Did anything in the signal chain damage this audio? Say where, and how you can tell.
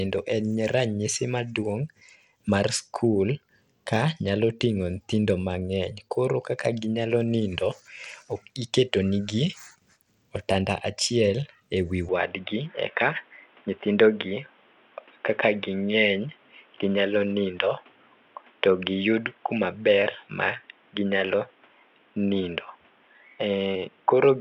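Yes. At the codec stage, the whole clip carries Bluetooth SBC compression: a gritty, grainy layer and unstable, thinned treble throughout. A coarse sub-band codec starves the upper bands of bits, which fits a low bit pool at a bitrate of around 96 kbps, likely over a Bluetooth link.

At the capture stage, from 12.09 s to the end, the input switched to a poorer device, likely a narrower microphone or headset call profile. Nothing survives above 3.8 kHz, a new noise floor appears roughly 35 dB down, and the switch is gapless with level unchanged.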